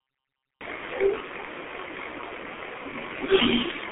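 Cut-off start, 0 to 0.61 s: the clip opens on digital silence, and at 0.61 s the speech cuts in mid-sound with no attack or fade-in. The recording or stream evidently began late, so the beginning of that sound is missing and the first audible moment lands abruptly. The jump from dead silence to running speech gives an unnatural, chopped-in onset.

G.723.1 codec, throughout: the speech passes through a narrow telephone band, roughly 300 Hz to 3.5 kHz, with nothing above 3.8 kHz, so it sounds muffled and thin. The damage is heavy. This early internet-telephony codec codes 30 ms frames and updates its vocal model slowly, which fits a very low bitrate around 6.3 kbit/s. That leaves the speech hoarse, with consonants smeared together.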